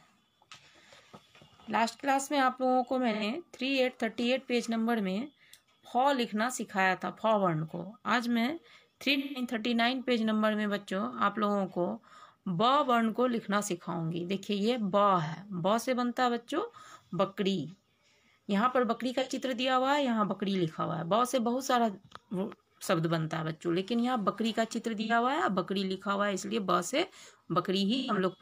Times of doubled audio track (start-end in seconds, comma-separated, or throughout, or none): none